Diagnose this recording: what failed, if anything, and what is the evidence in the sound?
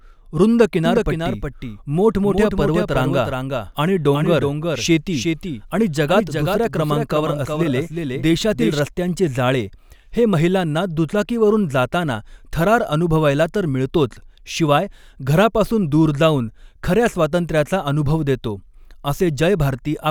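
A second copy of the signal was likely captured through a slower parallel path, or left in by an edit, so the mix carries a doubled audio track. From 0.85 s to 8.79 s, the speech is shadowed by an identical full-band copy trailing by around 400 ms and a few decibels quieter, roughly 5 dB down. The copy has no decay or room colouring, and it cuts in and out abruptly at those two boundaries.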